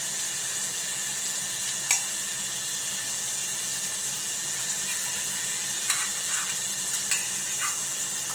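The clip is everyday sound, and Opus compression damage runs through it from start to finish, plainly audible throughout. The texture is grainy, rough and noisy rather than swirly: bands that would go hollow under MP3 are instead filled with folded or noise-like energy, so the spectrum stays full-width while its detail turns coarse. That fits music-mode (CELT) Opus at a low bitrate, likely around 16 kbps, not the muffled, narrowed sound of its speech mode.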